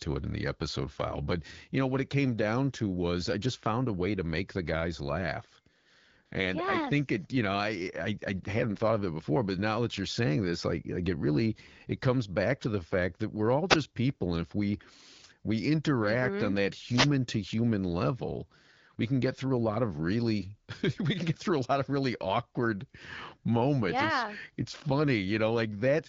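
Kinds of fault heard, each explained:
AMR comfort noise: At 5.79 to 5.85 s and 6.25 to 6.31 s, each lasting 60 ms, the phone treated the talker as silent and stopped sending speech frames. The receiver then substituted smooth synthetic noise, built from a rough level and spectrum estimate, for the real background.
Wireless microphone noise hit: At 13.69 to 13.76 s and 16.88 to 17.10 s, the analogue FM radio link faded as reflected signals cancelled. Receiver noise rose through the gap, heard as a short swish or burst of static.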